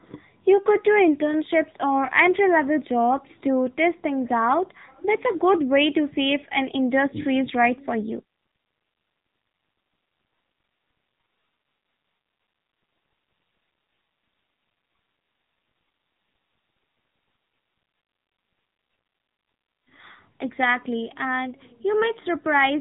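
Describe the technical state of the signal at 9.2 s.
At 9.2 s, as throughout, AMR narrowband mobile codec damage is plainly audible: buzzy, synthetic speech modelled from sparse pulses, consistent with a low bitrate near 8 kbps. Spectrograms show nothing above 3.8 kHz.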